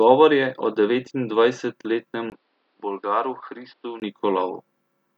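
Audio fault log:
2.3 to 4.02 s, input switched to a poorer device. After a 20 ms gap, the speech turns dull and boxy, with nothing above 5.5 kHz. It drops a little in level, and a faint new background noise appears. The likely cause is a narrower-band microphone taking over the input.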